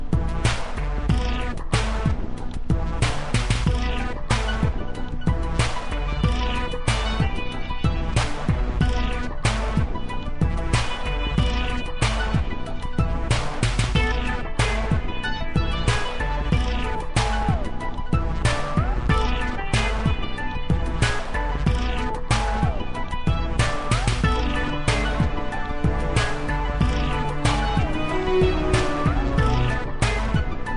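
From start to finish the sound is slowed and lowered together. Everything runs at about two thirds of its proper speed, and the pitch sits roughly seven semitones down, a drop of close to a fifth. Because tempo and pitch shift by the same proportion, this is a wrong sample rate: the samples are being clocked out more slowly than they were captured, with no conversion. A 0.667 ratio fits material recorded at 48 kHz and played back at 32 kHz.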